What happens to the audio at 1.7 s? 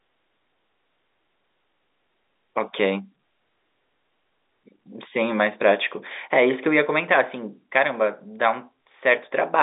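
Nothing goes wrong at 1.7 s: the speech there comes through intact, carrying only the narrow telephone band of its G.711 coding, with nothing above about 3.8 kHz.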